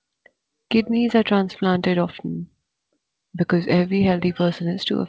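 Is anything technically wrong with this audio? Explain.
No, nothing technically wrong can be heard here.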